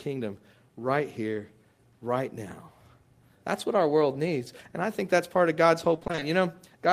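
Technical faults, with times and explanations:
5.95 to 6.23 s, repeated packet loss (robotic sound): seven packets went missing or arrived late in quick succession, each gap up to 20 ms. Each gap was filled by stretching the preceding sound, so half this span is patched, leaving choppy speech with pieces missing.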